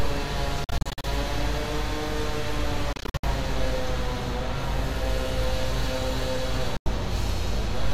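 Everyday sound that cuts in and out three times: between 0.64 and 1.05 s it drops to silence in short bursts totalling about 0.21 s, the longest gap about 46 ms; between 2.93 and 3.25 s, gaps total about 0.2 s, the longest 61 ms; at 6.77 to 6.88 s, about 90 ms is lost. Each gap starts and ends abruptly or with a fade of a few milliseconds, and the sound resumes further along, as if it had kept playing. This is likely a Bluetooth dropout, with audio packets arriving too late and being discarded.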